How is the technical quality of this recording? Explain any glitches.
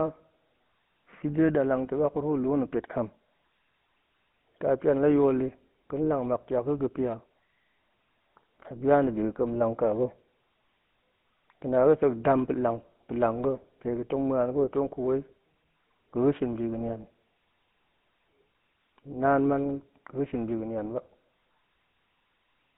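The recording is limited by one fault that runs through all of it: GSM full-rate codec coding. From start to finish the speech has a buzzy, gravelly roughness, and the band is confined to roughly 150 Hz to 3.5 kHz. The codec models the vocal tract as a filter and excites it with a sparse, regular pulse train built from only a fraction of the original samples. The fine detail of the voice is lost and replaced by that coarse buzz, at a rate that fits 13 kbps. On a spectrogram, energy stops sharply at 3.5 kHz and thins below 150 Hz, and the harmonics look smeared and grainy rather than cleanly striated.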